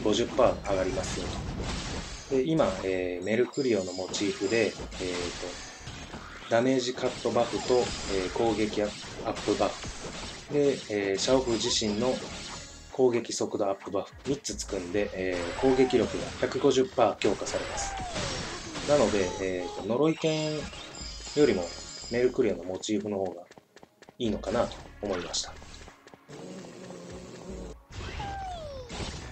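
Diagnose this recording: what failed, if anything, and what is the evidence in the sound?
Nothing failed in this recording.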